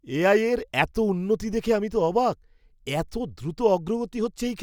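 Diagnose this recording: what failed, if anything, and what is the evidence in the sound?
Nothing in the speech signal points to a failure at any stage between capture and playback.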